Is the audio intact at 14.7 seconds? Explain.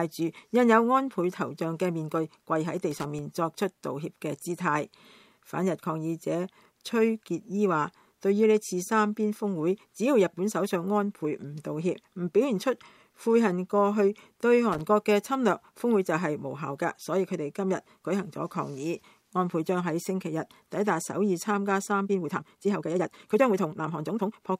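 No. Loose connector crackle runs from 14.72 to 14.81 s, a burst of under a tenth of a second. A worn or dirty contact keeps opening and closing as it shifts, chopping the signal, so the sound breaks into an irregular scratchy crackle.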